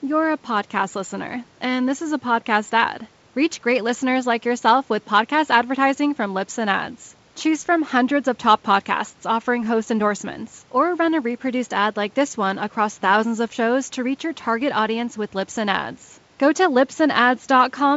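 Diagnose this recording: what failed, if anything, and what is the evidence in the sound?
Nothing has failed here: the speech carries the ordinary wideband-telephone sound of G.722 at 64 kbit/s, with its top end stopping around 7 kHz, and the room's own background noise sits about 37 dB under the speech, both just as they should.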